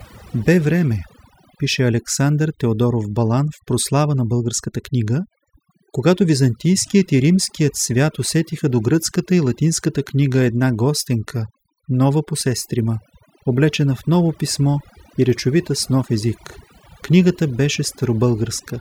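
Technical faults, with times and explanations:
Throughout, overdone noise removal: an over-aggressive noise reducer mutes individual frequency bands near its noise estimate, leaving near-silent twinkling gaps.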